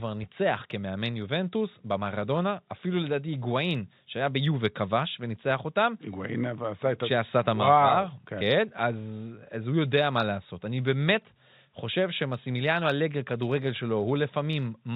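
No technical faults can be heard in this speech, which carries the narrow, telephone-band character of G.711 coding with nothing above 4 kHz.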